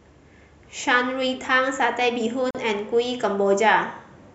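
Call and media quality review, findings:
Short hole in continuous speech, 2.51–2.55 s, about 42 ms, edges smeared, sound resumes exactly where it stopped. Gap at a join of encoded pieces: separately encoded segments, likely about 4 s each, concatenated untrimmed. Encoder start-up delay and last-frame padding left in at the boundary. Component: segmenter or muxer.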